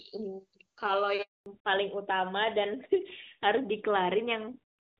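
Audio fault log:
1.22–1.46 s, handover gap: the speech cuts off over a few tens of milliseconds and then falls to silence for 240 ms before the sound resumes. The call was passed from one network to another, and no speech frames came through while the link was switching. Nothing is concealed or repeated across the gap, so whatever was said in that quarter-second is lost outright rather than smeared or muffled.
1.46 s to end, fallback to narrowband: as the audio returns after the gap, the top of the spectrum is gone, with nothing above 4 kHz for the rest of the clip. Before the switch, the HD Voice wideband codec carried clean speech with at most faint coding damage, at a quality that fits its top rate of around 24 kbit/s. Afterwards the sound is duller and rougher. This points to the new link renegotiating down to the older AMR narrowband codec at roughly 12 kbit/s.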